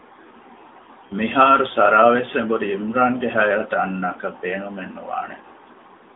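At 1.08 to 1.14 s, one lost AMR speech frame (20 ms) gets concealed with reused, quieter parameters: a short warble, showing as a waveform dip and smeared harmonics below the 3.6 kHz narrowband ceiling.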